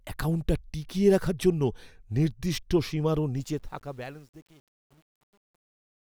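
A speech recording whose fade-out turns gritty from 3.36 s and is worst from 3.83 to 6.1 s: truncation distortion on a fade, with undithered steps suggesting roughly 9-bit resolution.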